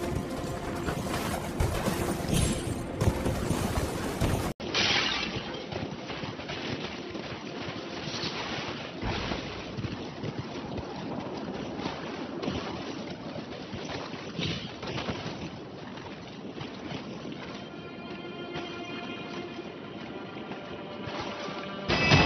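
At 4.52 s, after an 80 ms gap, the sound drops about 5 dB, loses everything above 5.9 kHz, and gains faint new background noise: likely an input switched to a poorer device.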